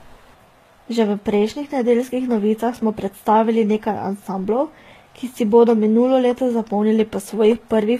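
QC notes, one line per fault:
Throughout, transcoding between lossy codecs: the speech carries two layers of codec smear, with nothing above 14.9 kHz. The likely cause is a low-rate HE-AAC pass re-encoded to Vorbis, which fits roughly 20 then 46 kbit/s. Vorbis spends bits on the earlier artefacts and adds its own.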